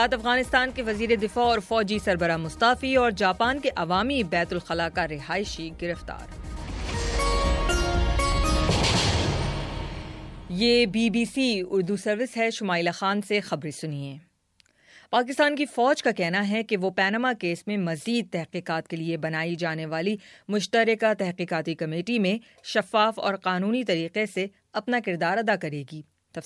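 Nothing in this one trips me up, and there's no fault to point to anywhere along the way.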